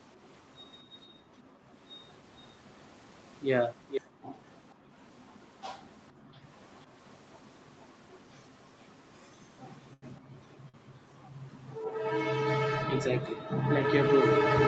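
At 1.07 to 1.7 s the room background sinks by about 19 dB, then returns. This is background gated by the echo canceller: it clamps the microphone while the far end plays, so the ambience drops out.

From 3.89 to 4.74 s a second, delayed copy of the speech trails it by 470 ms, about 10 dB down. The likely cause is an echo leak, where a loudspeaker-side canceller let part of its pickup return. Overlapping it, 4.01 to 4.95 s brings a deeper gate, about 40 dB, and 6.13 to 6.47 s another of about 40 dB.

At 9.93 to 10.04 s a short stall from a late packet holds a sound for 88 ms with a slight buzz or dip. The jitter buffer ran dry and stretched the last audio, then resumed where it left off with nothing lost, unlike a dropout. From 10.16 to 10.90 s the same 470 ms echo recurs, now very faint. A brief gate of about 36 dB falls at 10.21 to 10.34 s, and a second 48 ms stall at 10.69 to 10.76 s.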